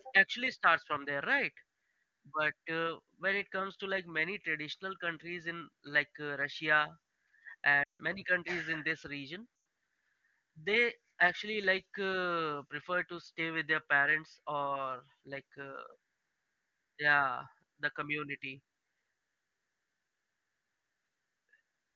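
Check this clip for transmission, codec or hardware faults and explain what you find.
Two dropouts from lost AMR speech frames, at 7.84 to 8.02 s and 9.55 to 9.65 s. When frames fail their checks, the decoder repeats the last good frame with falling gain, so the speech fades to near silence before returning rough. The first gap is about 160 ms, which fits eight 20 ms frames.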